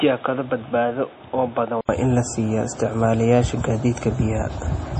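From the start to 1.89 s it sounds dull and boxy, cut off above 3.8 kHz, a few dB quieter with added noise: likely an input switched to a poorer device. An 80 ms gap marks the switch back.

Throughout, there's heavy swirly, watery smearing with nothing above 9 kHz, likely MP3 compression at a low bitrate, something like 32 kbps.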